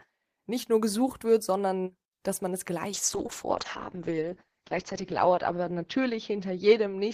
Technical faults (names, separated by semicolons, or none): call bitrate drop